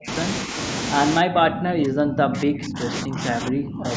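Right at the start, 0.0 to 0.1 s, the speech almost vanishes, a drop of around 40 dB. It dips slightly at 0.45 to 0.57 s, then from 1.2 to 3.91 s it keeps sinking by up to about 30 dB. That's speech suppressed in double talk, likely an echo canceller ducking the talker along with the far-end echo.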